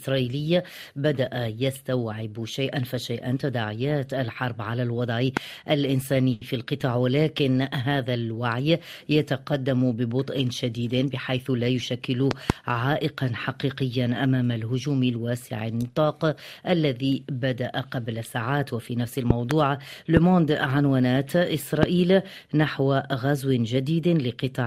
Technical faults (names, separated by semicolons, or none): loud pop; short stall from a late packet; jitter buffer speed-up